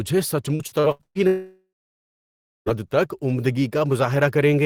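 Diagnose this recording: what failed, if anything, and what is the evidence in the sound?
The network failed twice. From 0.55 to 1.18 s there is repeated packet loss, heard as robotic sound. Five separate holes open in that stretch, the longest about 116 ms. Each hole is filled by stretching out the last good sound, so it turns choppy. About half of that span is concealment rather than real audio. Roughly 320 ms of the original never arrives.

From 1.27 to 2.69 s the audio stops for about 1.4 s. It begins as a stretched buzz that fades out. Nearly a second of silence follows. The sound then resumes further on, and the missing part is not recovered. The likely cause is a long network dropout. The receiver extends the last sound briefly, then gives up and waits until packets arrive again.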